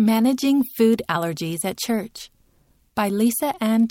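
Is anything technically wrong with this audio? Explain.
No, nothing is technically wrong.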